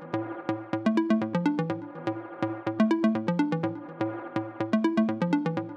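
No technical faults can be heard anywhere in the clip. The sound runs continuously with no break, jump or damage to the signal.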